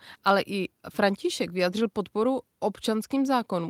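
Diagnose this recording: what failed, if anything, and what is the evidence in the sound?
Nothing failed in this recording, and the sound gives no evidence of a fault at any stage.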